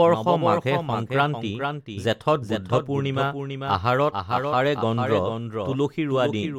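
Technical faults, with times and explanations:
Throughout, doubled audio track: the speech echoes about half a second later as a dry, quieter copy, likely captured again by a slower path.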